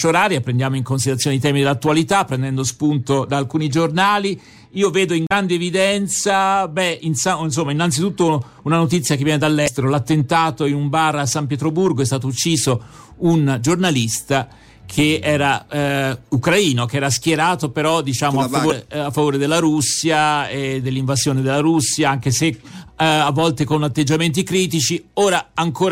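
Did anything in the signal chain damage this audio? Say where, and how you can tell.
Yes: damaged data in the compressed stream corrupted codec frames, and the decoder lost sync, producing short glitches at 5.27–5.32, 9.64–9.68 and 18.68–18.72 s.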